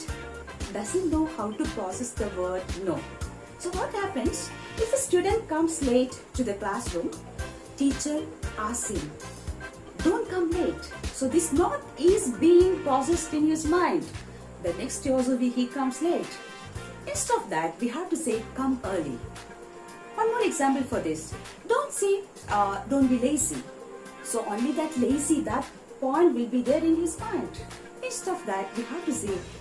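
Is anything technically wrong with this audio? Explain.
No, nothing technically wrong turns up here, so there's nothing to flag in this one.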